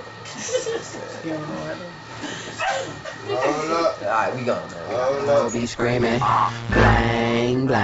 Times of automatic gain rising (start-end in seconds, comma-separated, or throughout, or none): none